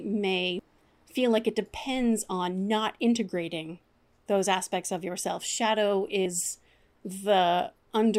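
At 0.59 s and again at 6.26 s the speech is broken by a brief blip of damaged data in a compressed stream. Corrupted bytes reach the decoder, which misreads the affected frame and loses sync until the next valid header. Each burst lasts only a few milliseconds.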